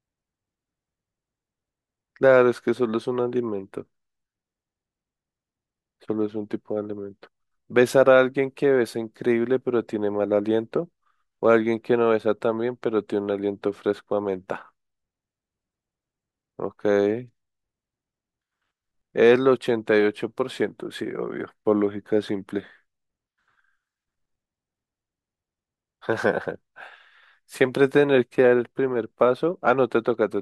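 No technical faults can be heard in the speech.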